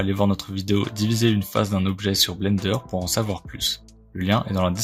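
No technical faults can be heard in this audio, so there is nothing to describe in time order.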